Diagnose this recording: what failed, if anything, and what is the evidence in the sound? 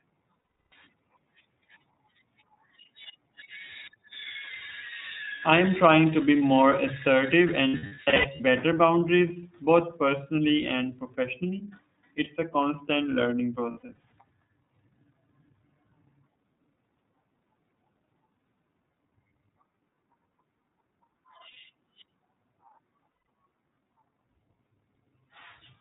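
The codec stage is the culprit throughout: everything above 4 kHz is gone, and the speech has that plainly rough, slightly synthetic edge of iLBC. That fits the 13.33 kbps mode, where each 30 ms frame's excitation is coded on its own.

Lost iLBC frames are a network problem. Held, buzzy vowel-like fills appear at 0.40–0.73 s, at 7.68–8.41 s after "to be more assertive", at 13.71–14.13 s after "a constant learning", at 21.51–21.57 s, and at 23.23–23.27 s. The decoder is repeating the last pitch cycle with noise. The two middle events are scattered losses with runs of about a tenth of a second or less, and recovery is immediate each time.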